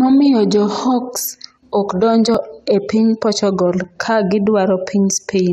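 At 2.35 s, between "jo hawks ok donjo" and "e piny", the speech jumps, and at 3.84 s a second jump cuts into the sound. Both are likely a dropped buffer (overrun): the samples were overwritten before the program collected them, losing around ten milliseconds each time, and the surrounding audio was spliced end to end. Unlike a dropout, no silent gap opens. The sound simply skips forward at a hard join.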